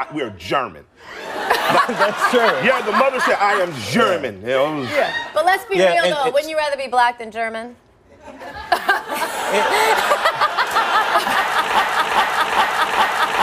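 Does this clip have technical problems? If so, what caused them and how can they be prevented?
Yes. A broken-record loop runs from 11.79 s to the end: a 410 ms fragment repeats four times back to back, likely because the player or stream stalled and kept resending its last buffered piece, so the real audio is lost. Detecting stalls and resyncing instead of repeating prevents it.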